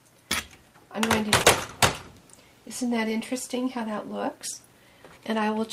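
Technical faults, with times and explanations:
1.43–1.45 s: skip ahead. Roughly a second of audio is missing. Playback jumps straight to later material with no gap or fill, so the sound on either side of the cut is butted together and the passage abruptly loses continuity.
3.55–4.81 s: jitter buffer speed-up. With more audio buffered than its target, the receiver repeatedly removed short pitch-period pieces, about a tenth of a second in total. The audio runs at 107% speed at unchanged pitch and sounds slightly hurried.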